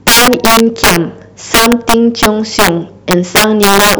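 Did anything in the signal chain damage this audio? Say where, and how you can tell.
Yes. Integer overflow runs throughout the speech, and it most likely comes from the sample-format conversion or an integer gain stage. The signal was driven about 11 dB past full scale. Instead of being limited, the loudest peaks, around one sample in twenty, wrapped to the opposite sign and jumped across the whole range. That is why loud syllables break into violent cracks, far harsher than the flattened buzz of ordinary clipping.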